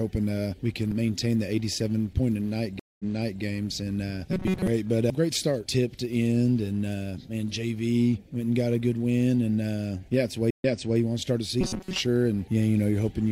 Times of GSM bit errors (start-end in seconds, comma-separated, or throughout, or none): none